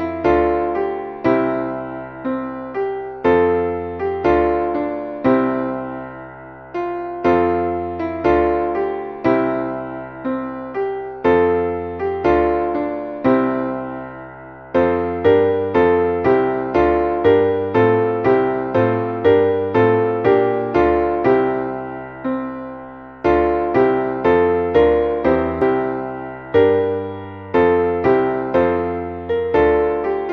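At 25.62 to 25.65 s, damaged data in the compressed stream causes a brief blip. The decoder misreads corrupted frames, loses sync, then recovers.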